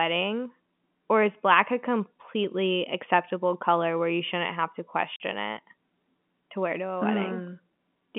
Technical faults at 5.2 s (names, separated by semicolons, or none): packet loss filled with silence